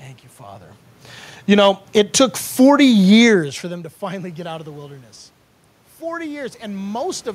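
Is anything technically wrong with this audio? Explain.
Yes, the level is pumped by the automatic gain control twice in quick succession. From 1.37 to 1.7 s, automatic gain falling pulls the level down by about 5 dB, and the room noise sinks with the speech, which rules out a talker leaning away. Then from 1.61 to 3.09 s, just before "for them to finally", automatic gain rising lifts everything back by about 4 dB over roughly one and a half seconds. The background swells together with the speech, unlike the natural changes when the talker moves near 0.5 s and 3.5 s.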